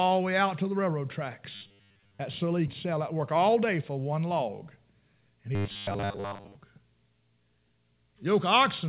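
Robotic sound from repeated short buffers appears at 1.55 to 2.20 s, right after "out to the railroad". Over most of that stretch the sound collapses into a rigid, metallic buzz at 100 Hz that only loosely tracks the speech. The likely cause is audio arriving too slowly for playback, so the receiver keeps looping the most recent fragment, about 10 ms long. That fixed repeat sets the 100 Hz pitch while the real audio in between never gets played.

A skip ahead occurs at 2.68 to 2.70 s. Roughly 0.4 s of speech is missing, and nothing fills the gap. The audio on either side is butted straight together, so the speech lurches forward abruptly. This happens when a stretch of audio is thrown away, in transit or by an overflowing jitter buffer, while later audio is already queued, which cuts the playback delay by about the same amount.

A jitter buffer speed-up runs from 2.85 to 4.27 s. The speech plays about 6% fast at unchanged pitch and sounds slightly hurried. 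The receiver was holding more audio than it wanted, so it trimmed short pitch-period-sized slices again and again, removing around 100 ms in total to bring the delay back down.

Robotic sound from repeated short buffers returns at 5.55 to 6.55 s with the same 100 Hz metallic buzz over most of that second, likely from the same starved playback looping the last few milliseconds. Throughout the clip, the call path's audio stops at 4 kHz, which fits G.711 mu-law narrowband coding.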